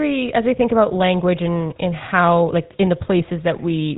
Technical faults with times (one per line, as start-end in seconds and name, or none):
0.00-3.97 GSM full-rate codec